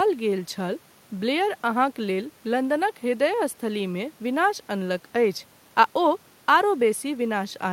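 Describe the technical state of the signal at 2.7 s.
At 2.7 s the speech signal is intact, with only the room's own background noise sitting about 33 dB below it.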